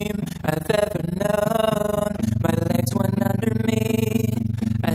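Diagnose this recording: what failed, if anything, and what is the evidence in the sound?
The whole clip has overlap-add ripple, which points to the processing stage. The level pumps up and down around 20 times a second, and the dips go about 60 dB deep, so it comes across as a harsh, rough flutter rather than a gentle wobble. Something framed the audio with windows whose overlaps don't sum to a flat gain, so every frame boundary carves a notch in the level at the frame rate.

From 2.69 s to 4.41 s the audio runs 5.42% fast and sits 91.4 cents sharp, close to a full semitone. Then it snaps back to normal speed and pitch. Speed and pitch move together as one step, which is the signature of a drift correction step at the driver or buffer stage. Clock-matching software most likely nudged the playback rate to rebalance its buffer, then released it.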